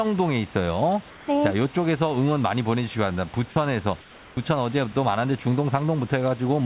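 A speech recording heard through a narrowband call path, with nothing above 4 kHz. From 1.1 to 1.28 s and again from 4.01 to 4.37 s, the room background, about 22 to 24 dB below the loudest speech, becomes a flat, featureless hiss about 4 dB quieter. This is comfort noise in place of the background, likely from the sender pausing transmission between phrases. Nothing goes silent and no speech is lost, which sets it apart from a dropout. At 3.5 s, for 60 ms, there is sound dropped by the voice detector: about 40 ms of sound gives way to the same steady noise, likely because the detector took that sound for background. Here the sound itself goes missing, not just the texture of a pause.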